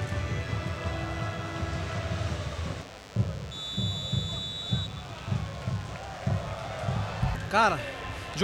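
A thin, steady buzz runs under the sound from start to finish, sitting roughly 20 dB below it and rich in harmonics above a 100 Hz fundamental. This is DECT cordless phone buzz: a nearby handset or base station transmits radio bursts 100 times a second, and the audio circuitry rectifies them into this tone.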